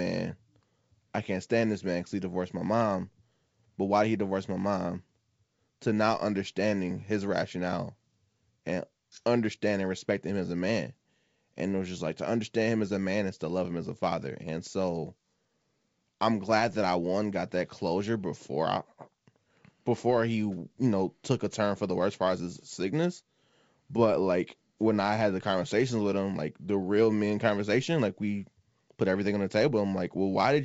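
No technical faults can be heard in this speech clip, which comes through the G.722 wideband telephone coding at 64 kbit/s.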